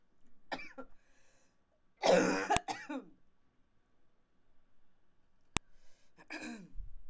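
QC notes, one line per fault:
2.57 s and 5.57 s, file header played as audio: a sharp, loud click at each point, 3 s apart, where separately encoded pieces meet. Each piece's WAV header bytes were left in and play as a burst of raw samples, unrelated to the surrounding sound.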